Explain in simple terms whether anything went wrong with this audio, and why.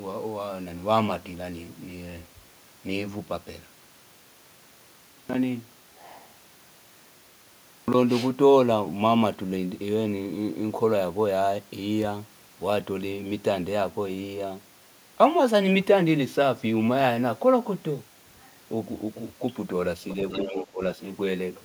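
Near the very end, from 20.09 to 20.66 s, a second, fainter voice can be heard underneath the main talker. This is the other side's voice leaking through, likely because their voice, played on the talker's loudspeaker, reached the microphone and wasn't fully cancelled.

Overlapping that, from 20.47 to 20.81 s, the main talker's voice suddenly drops away sharply for roughly a third of a second. This is speech suppressed in double talk: with both people speaking at once, the echo canceller likely couldn't tell them apart and turned everything down.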